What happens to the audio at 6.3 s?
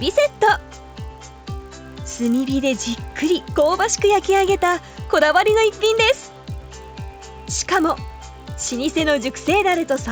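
At 6.3 s the audio carries the resampler restarted on every block fault, which runs through the whole clip. Each block is converted in isolation, with no neighbouring samples at its edges, so every boundary leaves a small error. These errors recur at 50 Hz, which points to 20 ms blocks, and they are heard as a buzz that appears only when there is signal.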